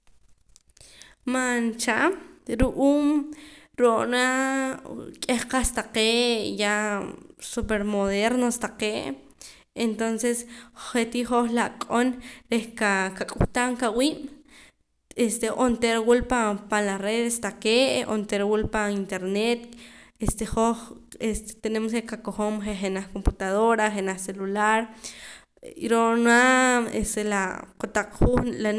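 No technical faults are audible.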